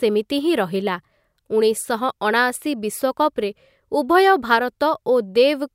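From 3.20 to 5.44 s the speech picks up sample clock jitter: timing wander of under a microsecond leaves a faint hiss, roughly 45 dB down, riding loud, bright syllables. On a spectrogram it is broadband haze tracking the voice's energy, absent in pauses.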